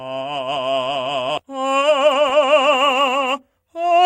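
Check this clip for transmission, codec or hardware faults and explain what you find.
Two transmission faults affect this music clip, a skip ahead followed by a jitter buffer speed-up.

Skip ahead, at 1.37 to 1.39 s: the music lurches forward, with the material before and after the jump butted together and no silence or fill between them. Roughly 0.7 s of music is simply gone, so the phrase loses its continuity at that point. The cause is a run of audio discarded while later audio was already queued, either lost in transit or thrown out when the jitter buffer overflowed, so playback resumed from the newer material.

Jitter buffer speed-up, from 1.43 to 3.99 s: the music runs about 15% fast while its pitch stays the same, so the passage feels rushed and the tempo no longer holds steady. The receiver was left holding more buffered audio than its target delay and worked the excess down by repeatedly cutting out short slices a pitch period or so long. 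Over this stretch those cuts add up to something around 0.4 s of removed music.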